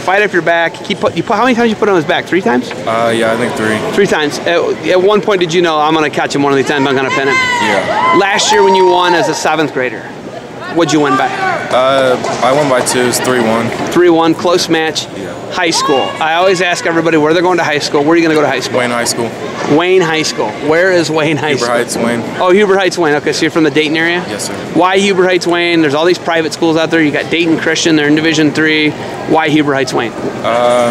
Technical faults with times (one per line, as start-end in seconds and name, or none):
0.00-30.91 hard clipping